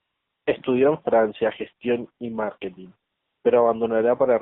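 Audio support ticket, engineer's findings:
AMR narrowband mobile codec, whole clip. Speech squeezed through AMR-NB at a low mode, which fits roughly 7.4 kbps. Line band about 150 Hz to 3.7 kHz, nothing above. Too few pulses per subframe to rebuild the excitation: buzzy, synthetic timbre, plainly audible coding damage.

AMR comfort noise, 0.00–0.46 s. Sender judged the line silent, stopped speech frames for about 455 ms. Receiver substituted generated noise: smooth, steady hiss replacing the real background before speech starts.

AMR comfort noise, 3.10–3.44 s. Same mechanism, about 340 ms without speech frames. Real background swapped for flat synthetic noise, audibly switching in and back out.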